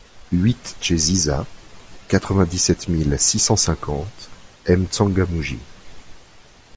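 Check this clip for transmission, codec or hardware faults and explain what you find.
No faults detected.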